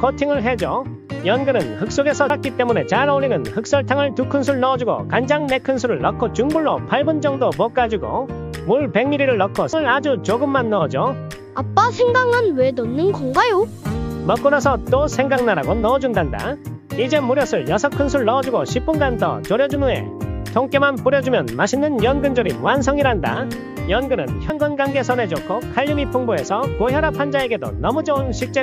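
At 2.30 s, 9.73 s and 24.50 s the sound jumps forward, losing about a fifth of a second at the first and last points and nearer a third of a second at 9.73 s. These are compressed frames skipped: the decoder drops whole frames, here two or three at a time, which fits a frame length of about 93 ms.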